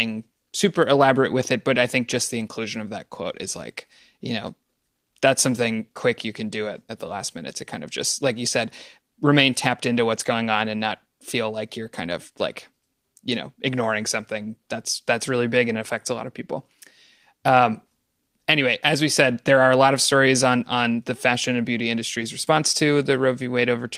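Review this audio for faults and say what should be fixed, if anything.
Lost packets rebuilt from error correction at 10.17 to 10.31 s (about 80 ms rebuilt, which fits four lost 20 ms frames) and 22.21 to 22.23 s. The decoder played the low-bitrate copies that the following packets carried, so there is no silence, but those stretches sound rougher and noisier. On a spectrogram they show as short, smeared, grainier patches rather than gaps; the waveform stays continuous. Reducing packet loss on the network path, for example with a wired connection or a less congested route, would prevent these.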